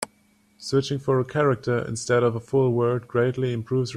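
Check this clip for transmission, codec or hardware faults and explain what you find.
No faults detected.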